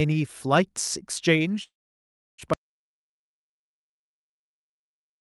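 A call audio freeze runs from 1.63 to 2.40 s in this speech recording: the last sound trails off and most of that 0.77 s, about 0.68 s, is silent, likely because delayed packets emptied the jitter buffer. The speech then resumes where it stopped, so nothing is lost but the delay grows. An audio dropout to silence follows at 2.54 s and lasts to the end, with digital silence and no room tone, probably from a lost input. The Opus call path's upper limit sits near 12 kHz.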